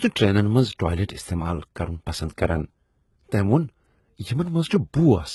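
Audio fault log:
throughout: HE-AAC compression, with heavy codec damage to the speech and nothing above 11.8 kHz, which fits a bitrate around 16 kbps. The treble is likely rebuilt from copied lower bands, so on a spectrogram the upper harmonics misalign with those below and stop at a sharp ceiling.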